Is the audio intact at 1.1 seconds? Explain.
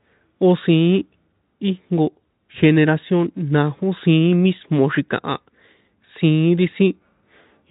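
Yes, at 1.1 seconds the speech is intact, with no audible fault at that moment.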